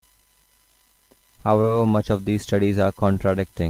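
From 1.50 to 2.14 s the speech shows hard clipping. Some stage could not pass the full level, so the peaks were sliced flat. The overdrive is small, about 1 dB. Only the loudest peaks are cut, so it sounds like a light crackle on peaks.

Inside that stretch, from 1.61 to 1.65 s, there is short concealed packet loss. About 20 ms of audio never reached the decoder in time. The receiver patched the gap by extending the previous sound, then blended back into the real signal. It is heard as a quick smear or wobble, and a brief sound there may be lost.

From 2.53 to 3.31 s the hard clipping returns, driven about 2 dB over. The flattened peaks add upper harmonics. The crackle is a little rougher than before.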